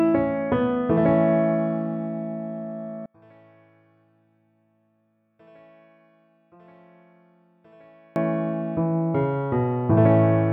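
From 3.06 s to 8.16 s one stereo channel is likely inverted in polarity, so one side runs in opposite phase to the other. When the two channels are summed to mono, the material they share cancels, and the audio falls by about 35 dB, leaving only a faint residue made of whatever differs between left and right. Centred content and low end all but disappear until normal level returns at 8.16 s.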